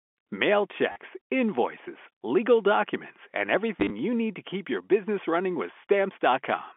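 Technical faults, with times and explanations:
0.92–0.96 s and 3.8–3.9 s, packet loss with last packet repeated: about 40 ms drops just before "invoices legal documents and", then 60 ms scattered across 100 ms ahead of "you need to keep". Replayed chunks repeat in runs that stutter robotically, buzzing near 100 Hz, which fits 10 ms packets.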